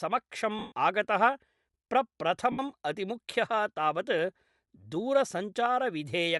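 A speech recording with a breathy, grainy edge throughout and a thinned, noise-filled top end, likely from Bluetooth LC3 compression at a setting that fits roughly 48 kbps. From 0.59 to 0.72 s and from 2.52 to 2.59 s the sound turns into a brief noisy smear. These are lost LE Audio frames: the decoder repeats the last spectrum with scrambled phases to fill each gap.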